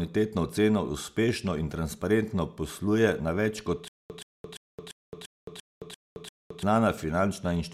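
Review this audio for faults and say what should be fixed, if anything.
Stutter with silent gaps runs from 3.88 to 6.63 s in this speech clip. A 126 ms fragment repeats eight times at a steady 344 ms period, with about 218 ms of dead digital silence after each burst. The likely cause is a stalled player or stream that kept retrying, replaying its last buffered chunk each time before running dry. Whatever speech belonged in that span never plays and is lost.

To prevent it, give the playback or streaming path more buffering headroom so a stall is absorbed rather than looped.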